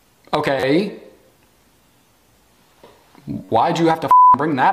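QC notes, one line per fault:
0.60–0.63 s, 2.03 s and 3.45–3.49 s, repeated buffer: a rapid buzzy stutter, the same slice of about 10.7 ms sounding again three times, once, then four times, each join hard and clicky. Fresh audio failed to reach the output in time, so the device replayed its last block, a length that fits a 512-sample buffer. Roughly 30 ms, 10 ms and 40 ms of the sound are lost at those points.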